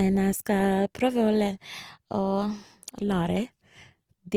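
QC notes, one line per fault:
throughout, Opus compression: speech sounds grainy and rough, likely Opus CELT near 24 kbps; the spectrogram keeps full bandwidth, but its upper bands look noise-filled, without holes.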